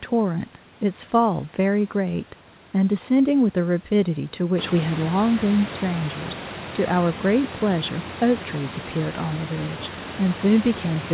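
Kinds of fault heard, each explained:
There is no fault.
Nothing stood out on listening to this speech, which has the narrow, telephone-like bandwidth of a call and room noise that grows about 16 dB louder partway through.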